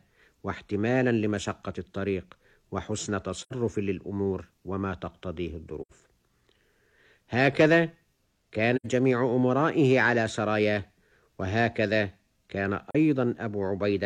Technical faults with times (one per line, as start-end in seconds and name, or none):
3.40-3.54 AAC frame loss with muting
5.81-5.92 AAC frame loss with muting
8.76-8.86 AAC frame loss with muting
12.90-12.95 AAC frame loss with muting